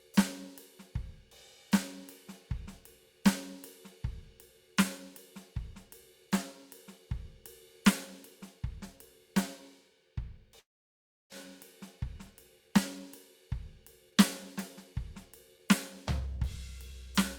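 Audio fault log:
10.59–11.34 s, long network dropout: the music breaks off, a fading buzz fills the gap, then about 0.4 s returns missing, likely from a stalled network stream.
13.49–14.16 s and 16.20–16.92 s, jitter buffer speed-up: short pitch-period slices are cut repeatedly to trim delay, so the music rushes at unchanged pitch, about 12% and 6% faster, losing steady tempo.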